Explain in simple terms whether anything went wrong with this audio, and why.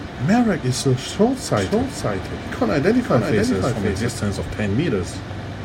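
From 1.57 s to 4.09 s, the speech is joined by a second copy of itself trailing about half a second behind, a little quieter than the original. It sounds like a clean, dry echo that switches on and off suddenly rather than fading like a real room. This is a doubled audio track. The likely cause is the same sound being picked up twice, once through a slower route, so the two copies play out of step.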